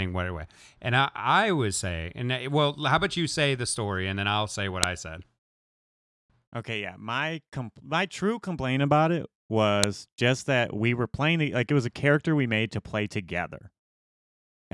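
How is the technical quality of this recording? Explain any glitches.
The recording has two audible glitches, both a file header played as audio. At 4.84 s, between "then I'll say what" and "I said", and again at 9.84 s, between "true complaint about it" and "just that we were", a sharp, loud click snaps through regardless of the speech. The 5-second spacing shows the audio was joined from pieces whose header bytes were never stripped, so those bytes play as samples. On a waveform each is a tall, near-instant spike; on a spectrogram, a thin vertical line across all frequencies.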